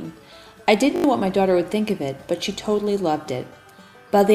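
A repeated-buffer fault interrupts the audio from 0.96 to 1.04 s. When fresh data failed to arrive, the playback device replayed its last 20 ms buffer four extra times, producing a rapid stutter with a hard splice at each repeat and swallowing about 70 ms of the real signal. On a waveform, one short segment appears copied end to end with abrupt discontinuities at 20 ms spacing. A spectrogram shows vertical lines at each join over a frozen, repeating spectral slice.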